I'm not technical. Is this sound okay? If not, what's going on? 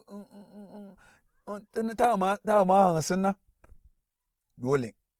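No. The speech has a rough, grainy texture that runs through the whole clip, from start to finish. Clear tones sound plainly noisy and gritty. The sound still reaches high up, so it isn't muffled. This is likely Opus compression. To save space, the encoder keeps the overall loudness of each pitch range but fills in fine detail with copied or noise-like sound. That substitution is what you hear as grain.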